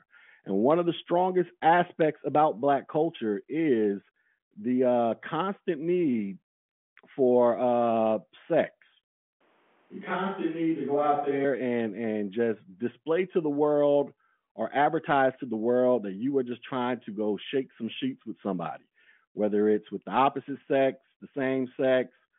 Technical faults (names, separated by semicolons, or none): switch to a distant microphone